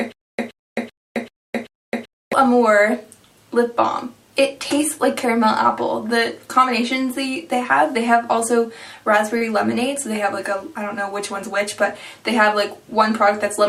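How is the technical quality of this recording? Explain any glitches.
The recording has two glitches, one at the start and one near 9.4 s.

From 0.00 s to 2.33 s there is a stutter with silent gaps, already under way when the audio begins. A 123 ms burst repeats five times, every 386 ms, with about 263 ms of dead silence between. A stalling stream replaying its last fragment is the likely cause. The audio that should have filled that time is gone.

At 9.37 to 9.44 s there is a short stall from a late packet. A packet arrived late, so the receiver stretched the last sound by 35 ms until it came. Nothing is lost. The sound just hangs briefly, and everything after runs 35 ms late.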